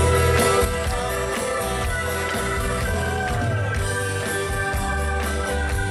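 At 0.65 s a sudden gain jump drops the level by about 6 dB and it stays down to the end. The background noise falls in step with the sound, in a single instant, likely a gain setting applied without a ramp, unlike a fade or compressor, which would glide.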